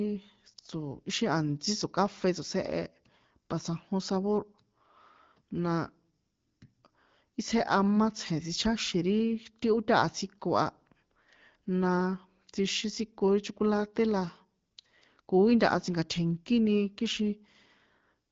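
Nothing in this speech recording points to a technical fault. The sound has the character of the AMR wideband (HD Voice) codec working as intended, with clear speech, only a light coding colour that fits a rate of 12.65 kbit/s, and nothing above 7.5 kHz.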